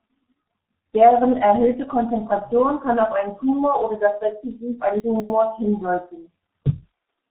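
Speech that sounds muffled and hoarse throughout, with smeared consonants and nothing above 3.8 kHz, points to the G.723.1 codec, which fits a low bitrate of about 6.3 kbit/s. From 5.0 to 5.3 s the sound jumbles. These are chunks out of order: a segment of about 100 ms plays two blocks late, leaving hard joins.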